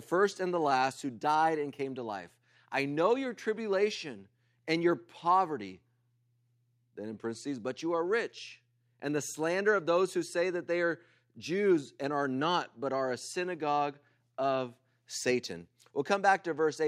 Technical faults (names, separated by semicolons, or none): none